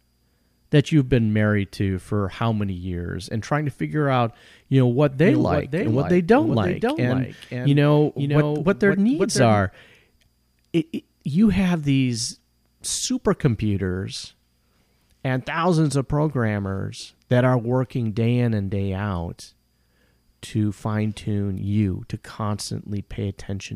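From 5.22 s to 9.59 s the speech is accompanied by a doubled audio track: a second, full-band copy trailing about half a second behind, roughly 5 dB quieter, with no reverberant tail or room colouring. It switches on and off abruptly at those boundaries. The likely cause is a second, slower capture path or an edit leaving two misaligned copies. On a spectrogram each syllable's pattern reappears shifted right; the waveform shows overlapping, offset envelopes.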